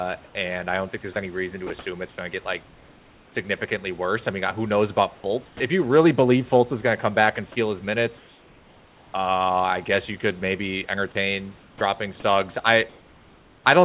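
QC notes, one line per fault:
0.26–3.35 s, sound chopped by the voice detector: speech drops in and out, with quiet edges and syllables giving way to flat hiss totalling nearly a second, ending just before "worse I mean who". The sender's voice detector likely kept toggling transmission, with comfort noise filling the gaps.
5.15–5.6 s, 8.18–9.14 s (after "back and steal his"), 11.6–11.81 s (after "you could maybe entertain"), 12.89–13.64 s, comfort noise in place of the background: the room tone becomes a smooth, featureless hiss about 1 to 2 dB quieter. Transmission likely paused, and the receiver synthesised noise shaped like the background.
5.56–5.6 s, onset clipped by the voice detector: speech returns abruptly with its first 40 ms missing, so the soft start is lost. The detector was likely slow to notice sound resuming, so those opening moments weren't sent and comfort noise played instead.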